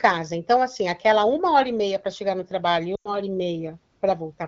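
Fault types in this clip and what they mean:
lost AMR speech frames: After "chegar no trabalho e", near 2.95 s, the speech smears into a brief hold that fades fast, then returns briefly rough. About 100 ms of frames failed their checks, so the decoder repeated its last pitch and vocal tract settings with falling gain.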